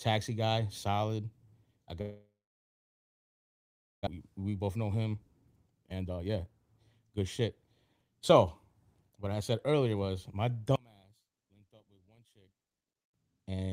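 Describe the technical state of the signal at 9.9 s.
At 9.9 s the receiver is partway through a jitter buffer speed-up running from 9.10 to 10.09 s. Its buffer had filled beyond its target depth, so to bring the delay back down it cut out short slices of a pitch period or a few at a time, over and over, trimming around a tenth of a second in total. The speech plays at about 111% speed with its pitch unchanged, so this stretch sounds hurried.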